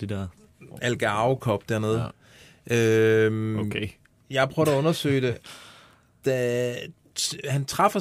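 A speech recording with no technical faults to point to. Listening through it, nothing stands out as a problem at any moment.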